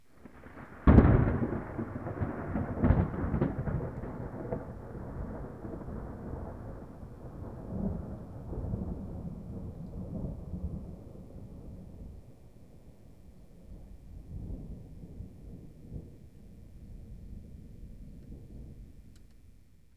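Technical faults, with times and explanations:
No technical faults can be heard in this recording. There is nothing here that needs a time or an explanation.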